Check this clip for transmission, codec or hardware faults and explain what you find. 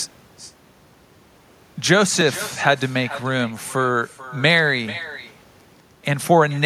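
Two faults stand out: an echo that runs through the whole recording, and brief periodic dropouts.

Echo with no canceller: every phrase is shadowed by a thinner copy about 16 dB quieter, arriving roughly 400 ms later. The far end is playing the call through a loudspeaker, its microphone picks it up, and nothing cancels it before it returns across the network.

Periodic USB or driver dropouts: small ticks occur every 2.0 s, from 2.21 s to 6.20 s. Each is a skip of roughly a millisecond of audio. A recurring background task is stalling the USB bus or audio driver, and the missing samples create a click in the signal.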